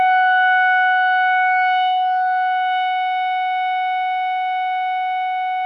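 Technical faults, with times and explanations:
No technical faults can be heard in this music clip. There is nothing to time or explain.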